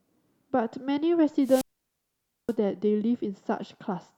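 At 1.42 s the speech breaks up in a wireless microphone squelch dropout lasting until 2.55 s. The radio link from the transmitter weakens, static swells briefly, and the receiver's squelch then mutes its output for about 876 ms, leaving a hole of near silence before the speech comes back. That rising hiss before the gap is what separates it from a digital packet-loss dropout, which cuts to silence abruptly with no noise leading in.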